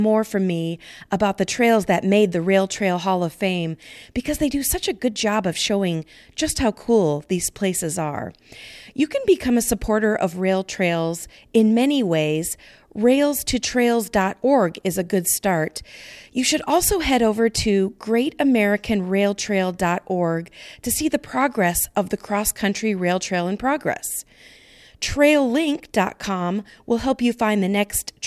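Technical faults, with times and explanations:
No technical faults heard.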